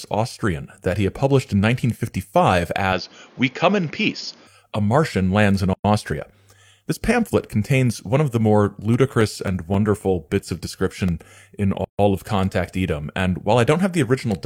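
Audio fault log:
2.93 to 4.47 s, input switched to a poorer device: the speech abruptly loses everything above 6.9 kHz and gains a new noise floor around 30 dB below it, then returns to full band at 4.47 s. It turns dull and boxy with no silence at either switch and little change in loudness. This points to a likely change of input to a narrower-band microphone or headset profile. On a spectrogram the top of the energy is cut off flat at 6.9 kHz, with a faint noise band filling in beneath, while the waveform keeps roughly the same height.
5.73 to 5.84 s and 11.84 to 11.99 s, gap at a join of encoded pieces: continuous speech drops into silence for 110 ms and then 144 ms before carrying on from where it stopped. The gaps fall 6 s apart, which fits separately encoded pieces joined with their start-up delay and final-frame padding left in. The waveform goes flat between near-vertical edges, slightly blurred by the codec, and the spectrogram shows a clean vertical blank strip across all frequencies.
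8.67 to 11.35 s, CD scratch ticks: eleven small ticks and micro-dropouts, the longest lasting a few milliseconds, recur at roughly four a second, uneven in strength across the span. This is the pattern of a disc blemish corrupting more data than error correction can repair on each revolution, leaving the player to interpolate or mute the samples. The waveform shows evenly spaced short notches or spikes, and the spectrogram shows thin vertical broadband lines at regular intervals.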